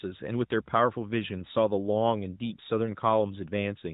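A speech recording carried over the AMR-NB narrowband mobile codec at 12.2 kbps, and nothing is technically wrong with it.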